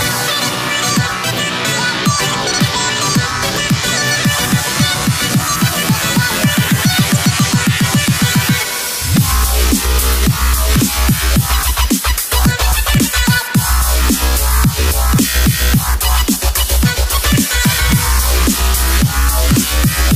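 There are no technical faults to describe at any point in the audio.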